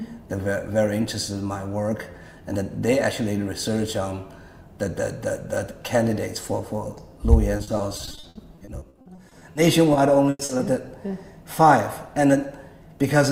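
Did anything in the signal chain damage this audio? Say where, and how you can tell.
Yes: repeated packet loss (robotic sound) at the network stage, from 7.57 to 9.57 s and 9.93 to 10.61 s. Gaps up to 60 ms, then 100 ms, are patched by extending the last sound, giving a choppy texture with pieces missing instead of the silent clicks of buffer underruns.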